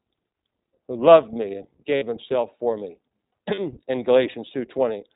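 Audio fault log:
throughout: iLBC codec. The speech is band-limited to narrowband, so nothing above 4 kHz survives and sibilants and breath detail are cut away. Each 20 ms frame's excitation is coded on its own, and at what sounds like a rate near 15 kbps the result is intelligible but plainly rough and slightly synthetic. That comes from modelling the residual at low resolution rather than carrying the full waveform.
1.96–2.03 s and 3.54–3.59 s: lost iLBC frames. Two short dropouts, about 60 ms and 40 ms long, consistent with three and then two consecutive 20 ms frames going missing. The decoder covers each gap by repeating the last pitch cycle blended with noise, so each one comes across as a brief held, faintly buzzy, breathy vowel rather than silence. Since iLBC frames carry no dependence on earlier ones, the speech snaps back to normal right after each gap.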